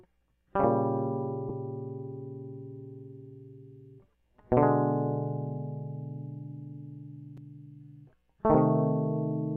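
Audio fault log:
1.49 s, lost LE Audio frames. A 7.5 ms gap, which fits one dropped Bluetooth LE Audio frame. The LC3 decoder filled it by repeating the previous spectrum with random signs. So the music briefly smears into a short noisy blur rather than a click.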